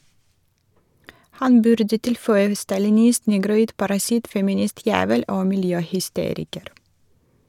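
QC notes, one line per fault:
No faults heard anywhere in this speech recording.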